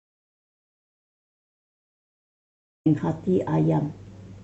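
Speech recording with an audio dropout to silence. The clip opens in silence, with no room tone at all. The speech only comes in at 2.86 s, mid-flow. The likely cause is a lost input, such as a disconnected device or a stray mute, while recording continued.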